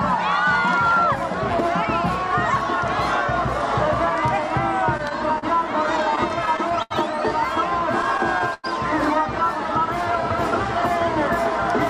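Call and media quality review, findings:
Short stall from a late packet, 4.97 s and 5.38–5.44 s. Sound held about 17 ms, then 39 ms. Jitter buffer ran dry waiting on a late packet; receiver extended the last sound, then resumed in place. Nothing lost, playout delay grew.

Repeated stalls (stutter), 5.86–6.92 s and 8.02–8.66 s. Eight holds totalling 140 ms (longest 80 ms), then four totalling 131 ms (longest 96 ms). Jitter buffer repeatedly emptied under late arrivals; concealment stretched and faded sound. Audio drags, nothing dropped.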